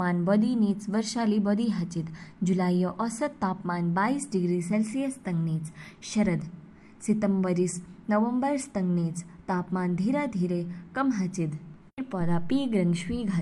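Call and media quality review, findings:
No faults found in this speech recording.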